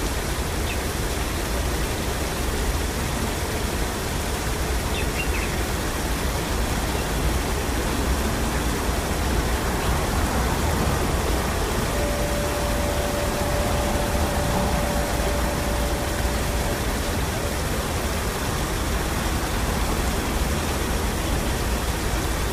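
No faults are audible anywhere in this recording of sounds.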